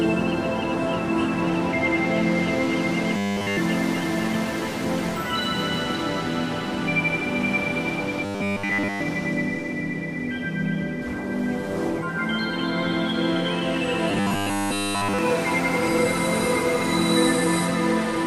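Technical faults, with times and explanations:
3.17–3.57 s, 8.25–9.01 s and 14.10–15.19 s, robotic sound from repeated short buffers: In each span the audio becomes a rigid, metallic buzz at a fixed 100 Hz that only loosely tracks the underlying sound. The cause is likely late-arriving audio being covered by looping the last short block. A 10 ms block repeated back to back produces the 100 Hz pitch. The first two spans are repeats almost entirely. In the third, most of the span is repeated and some real audio still gets through.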